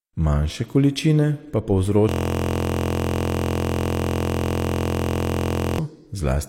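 Speech clip with a system hang loop from 2.09 to 5.79 s: a 23.2 ms fragment repeats as a steady 43.1 Hz buzz, which fits a frozen 1024-sample ring buffer.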